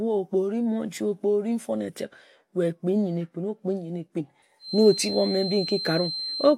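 A speaker-to-mic loop likely poised at the edge of feedback sustains a feedback whistle from 4.58 s: a thin 4.1 kHz tone about 10 dB under the speech.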